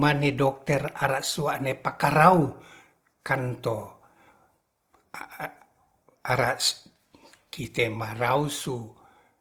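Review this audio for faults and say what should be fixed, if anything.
Opus compression runs through the whole clip. The speech sounds grainy and rough, with noisy texture filling the upper bands instead of leaving gaps, while the content still extends to about 20.2 kHz. The likely cause is Opus in its music (CELT) mode at a starved rate, which fits roughly 24 kbps. To prevent it, re-encode from the original source at a higher bitrate.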